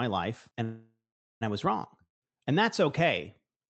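Speech carried over a call link, with the top end cut off at about 8 kHz. At 0.63 s the sound freezes. The last sound stretches into a fading buzz, then about 0.4 s of silence. Speech picks up again at 1.43 s, right where it stopped. Nothing is lost, but everything after it runs about 0.78 s late. This is a call audio freeze, likely from delayed packets draining the jitter buffer. At 2.03 s a long network dropout follows. The sound again decays into a brief buzz and about 0.12 s of silence. It returns at 2.31 s, but roughly 0.18 s of speech is gone. The likely cause is packets that never arrived.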